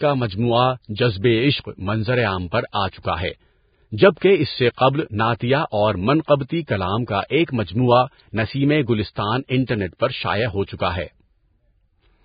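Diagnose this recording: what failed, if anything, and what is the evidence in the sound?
The whole clip sounds hissy and grainy, with nothing above 4.9 kHz and roughened treble. That points to the codec stage, likely Vorbis compression at a very low rate, around 16 kbps. The encoder quantised the upper residue so coarsely that detail turned into noise.

There's pre-echo, also from the codec, at 2.72 s just after "عشق منظرِ عام پر", and from 4.18 to 4.21 s right before "اس سے". A short hiss of about 19 ms and then 33 ms runs ahead of each attack. The block's quantisation noise spills into the quiet lead-in.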